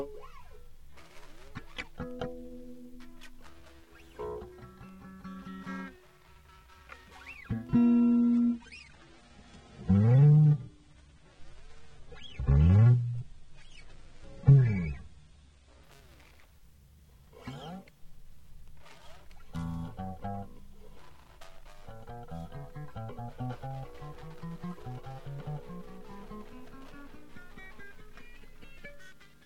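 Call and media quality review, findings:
Adaptive stream at a lower bitrate, 7.84–15.84 s. Treble suddenly gone above 9.7 kHz, codec smear and swirly artefacts up, no gap at either switch. The player likely fell to a lower rung for 8 s when throughput dipped. It sounds like a low-rate AAC tier, maybe around 32 kbit/s, before it climbs back.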